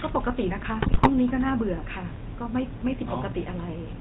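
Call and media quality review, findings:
GSM full-rate codec across the whole clip: buzzy, gravelly speech with nothing above 4 kHz. Regular-pulse excitation coding, which fits the 13 kbps full-rate codec.

GSM bit errors at 0.82–1.1 s and 2.97–3.14 s: squawks, pops and gargling. Corrupted filter, pitch and gain values distort the decoded frames, worse in the first burst.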